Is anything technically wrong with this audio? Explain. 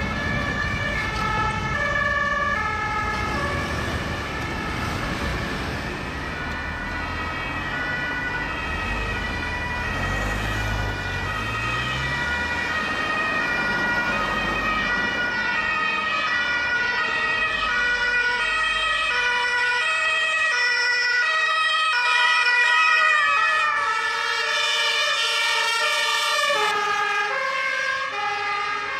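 Yes. From 22.05 to 26.71 s there is a doubled audio track: a full-band copy trails the original by about half a second at roughly the same level, likely from a slower second capture path. It sounds like a dry, hard-edged echo starting and stopping abruptly. The waveform and spectrogram show every event repeated at that fixed offset, with no decay.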